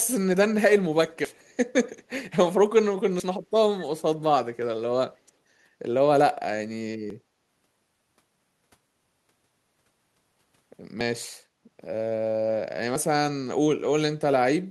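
At 1.25 s the speech jumps abruptly, losing a sliver of sound around a twentieth of a second long. This is likely audio missing between chunks, dropped while a 2 s processing block was handed to the next. From 1.38 to 1.53 s a very faint, delayed copy of the speech trails it by 208 ms, far below the main level. This is an echo leak, likely loudspeaker pickup that the far side's echo canceller left in. The same seamless skips return at 3.20, 7.10, 11.01 and 12.96 s, always landing on boundaries of that 2 s chunk grid.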